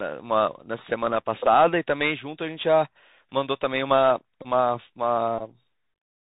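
A speech recording carried over a Bluetooth headset link, and the whole clip shows the Bluetooth CVSD headset codec plainly. Nothing above 4 kHz survives, so the sound is narrow and boxy. Each sample is coded as one up-or-down step whose size adapts, which fits a 64 kbps CVSD stream. Loud, bright moments outrun that step and distort. S sounds come out scratchy. A fine granular hiss sits under everything.

There are also two bursts of Bluetooth headset packet repeated. The first runs from 4.42 to 4.47 s and the second from 5.39 to 5.42 s. In each, voice packets were lost, and the chip replayed the last good packet's bits over and over. That repetition every 3.75 ms gives a short steady buzz near 267 Hz. The first gap covers about 26 ms, which points to roughly seven lost packets. The second covers about 19 ms, which suggests about five.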